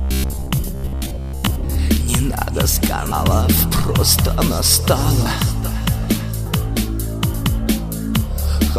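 From 0.02 to 1.75 s the sound becomes a rigid, metallic buzz at 66.7 Hz. This is robotic sound from repeated short buffers, likely from 15 ms blocks replayed for most of that stretch.

Compressed frames are skipped at 3.11, 5.25 and 6.46 s. Each is a point where the audio jumps ahead by whole 26.1 ms frames. That is about 300, 150 and 300 ms lost.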